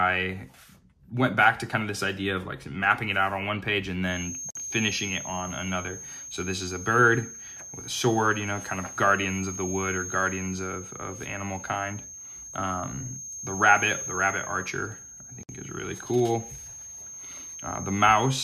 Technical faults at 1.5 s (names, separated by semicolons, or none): none